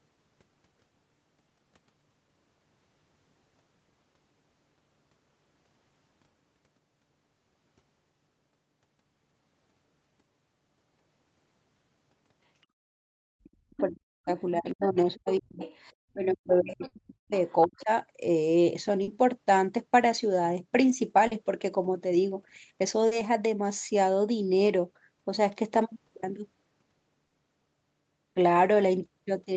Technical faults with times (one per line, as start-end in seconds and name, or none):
13.44-13.81 other side's voice leaking through
13.53-15.62 speech suppressed in double talk
14.71-15.78 other side's voice leaking through
16.09-17.34 speech suppressed in double talk
16.87-16.94 short concealed packet loss
17.48-17.82 other side's voice leaking through
17.65-17.89 speech suppressed in double talk
19.03-19.10 short concealed packet loss
21.27-21.34 short concealed packet loss
23.07-23.14 short concealed packet loss
27.27-27.34 short concealed packet loss